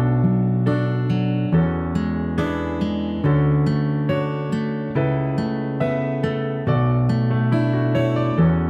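No technical faults can be heard anywhere in this audio.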